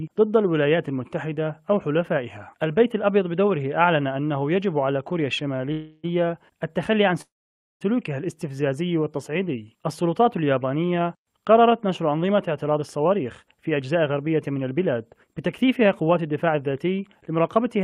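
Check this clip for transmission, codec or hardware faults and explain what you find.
Three related network-delivery problems show up here, all on the receiving end of a packet stream.

First, a short stall from a late packet at 5.56 to 5.61 s. One packet arrived late, the jitter buffer ran dry, and the receiver stretched the last bit of sound for about 31 ms until the packet showed up, then carried on from the same spot. Nothing is lost, but that moment hangs slightly too long, with a faint buzzy smear.

Next, two call audio freezes, at 5.72 to 6.05 s and 7.21 to 7.83 s. Both sound like the stream stopping and then resuming exactly where it left off. The likely cause is packets held up in transit, leaving the buffer empty. In the first freeze, about 315 ms of filler continues the last sound as a buzz that never drops to silence. In the second, about 590 ms is inserted, and roughly 540 ms of it is dead silence after the filler fades.

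Finally, a jitter buffer speed-up runs from 12.51 s to the end. After those delays the buffer was holding more audio than it wants, so the receiver trimmed tiny pitch-period-sized slices over and over, roughly 0.4 s in total. The sound plays about 7% fast with the pitch unchanged, so it comes across as a bit rushed.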